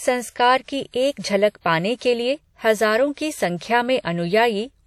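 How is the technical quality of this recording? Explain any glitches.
The recording's technical quality is reduced by plainly audible codec damage across the whole speech clip.

WMA compression, throughout: likely a transform codec working at a low rate, the level of damage fitting roughly 48 kbps. Quantisation noise smears across long blocks, giving a ringing, washy edge and hiss that swells with the speech, and nothing is heard above 14.9 kHz.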